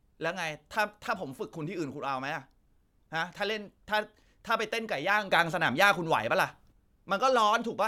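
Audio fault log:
5.31–6.72 s, sudden gain jump: speech and background noise step up together by about 6 dB with no ramp, then fall back at 6.72 s. This is likely a digital gain change applied between one sample and the next.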